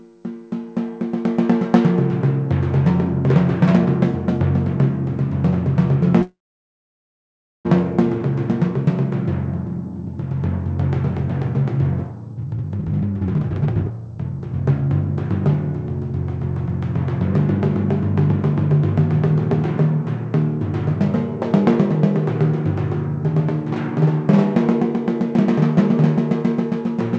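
From 6.22 to 7.67 s there is a call audio freeze. The sound stalls, a brief fading continuation gives way to about 1.3 s of silence, and the audio then resumes exactly where it stopped, so nothing is lost. This is likely an emptied jitter buffer and not a dropout. From 12.35 to 14.90 s, a jitter buffer speed-up clips many short pitch-period pieces, around a second and a half in total. The audio rushes at roughly 156% speed with its pitch unchanged, unlike a plain playback-rate increase. The call path's codec passes nothing above 8 kHz.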